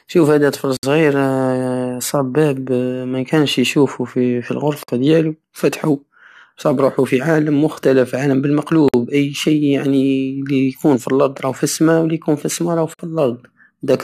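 Gaps at joins of encoded pieces occur at 0.77, 4.83, 8.88 and 12.94 s, every 4 s. The silence is about 63 ms after "شوف هدا طفل", then 53 ms at each later join. Separately encoded speech pieces were joined with their start delay and end padding left in, so the speech stops abruptly and resumes where it left off.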